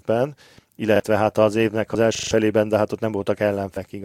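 A repeated buffer at 0.96 to 1.00 s, just before "hát az évnek", replays one 40 ms piece of speech once because fresh audio did not reach the device in time. The result is a quick double-tap stutter with a hard join.

Compressed frames skipped at 1.94 s, right after "hát az évnek", means the decoder dropped whole damaged or missing frames. The speech jumps forward by roughly 50 ms.

A second repeated buffer runs from 2.15 to 2.31 s, just before "de hát ott". The same 40 ms buffer plays four extra times, giving a longer rattling stutter and losing roughly 150 ms of speech.

Compressed frames skipped again at 3.76 s, this time a larger jump of about 150 ms. The speech jumps ahead where the missing stretch falls out.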